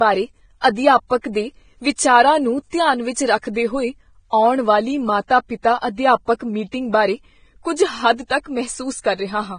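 Across the whole recording the speech sounds hissy and grainy, with roughened vowels, smeared consonant onsets and nothing above 9.7 kHz. This is likely Vorbis compression at a low quality setting. The encoder has pulled its cut-off down and quantised the remaining treble so coarsely that fine detail is replaced by noise of similar energy. The heavy damage points to a bitrate somewhere in the low twenties of kbps.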